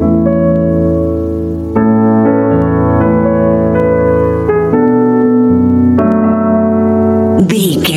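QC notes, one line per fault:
Throughout, gain pumping: the level keeps getting pulled down every time something loud comes in and let back up after, with a swing of around 15 dB between the two. Loud and soft passages sit oddly close in level, so the whole thing sounds squashed. This is likely input gain set way too hot for the mic, with a fast limiter or compressor yanking it back down on each peak.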